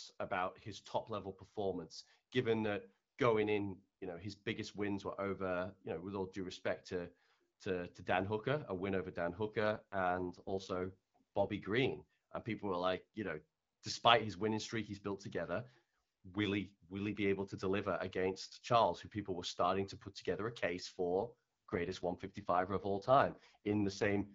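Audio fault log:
9.60–11.49 s and 21.12–24.34 s: AMR rate drop. Speech turns rough and synthetic, but the band stays the same and nothing drops out, which fits AMR-WB stepping down from 12.65 to 6.6 kbit/s.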